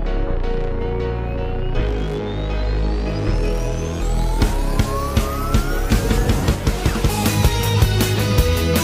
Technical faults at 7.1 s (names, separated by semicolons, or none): damaged data in a compressed stream